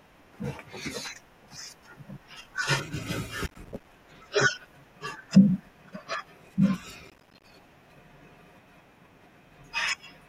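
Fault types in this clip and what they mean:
processor overload crackle: missed buffer deadlines leave rapid tiny silent gaps, heard as two gritty bursts near 3.5 and 7.1 s, unlike one clean dropout.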